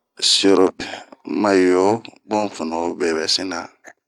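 At 0.79 s a brief glitch cuts across the speech, lasting only a fraction of a syllable. The sound comes from damaged data in a compressed stream: bytes at that point were lost or corrupted, so the decoder misread the affected frame, lost its place in the stream, and had to hunt for the next valid frame header before normal decoding of the speech could resume.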